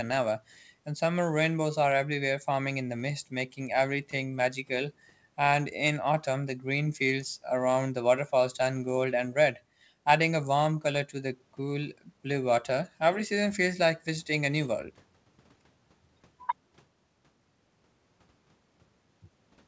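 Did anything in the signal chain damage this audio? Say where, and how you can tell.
No, nothing in the signal chain damaged this audio; the call path's band limit, with nothing above 8 kHz, fits a G.722 codec working as intended.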